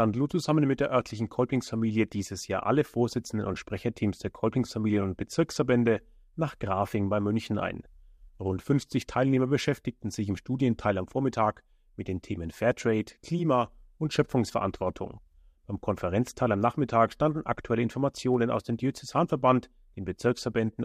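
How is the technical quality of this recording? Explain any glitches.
The technical quality of the recording is sound, with no glitches to explain.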